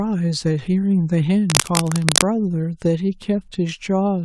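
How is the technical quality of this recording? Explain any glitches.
There's one clear glitch in this speech recording. From 1.50 to 2.23 s you get cable scratch noise, a dense, uneven scratchy rustle roughly as loud as the speech. It's likely a worn cable or connector being moved, so its contact resistance jumps around and spits noise bursts into the signal.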